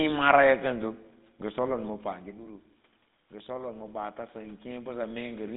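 The whole clip passes through the GSM full-rate codec. Its buzzy, gravelly roughness fits a 13 kbps link. Nothing reaches above about 3.8 kHz.

From 3.3 s to 5.52 s the automatic gain is rising. The input fell about 11 dB, so gain climbs about 6 dB. Voice and room noise swell together.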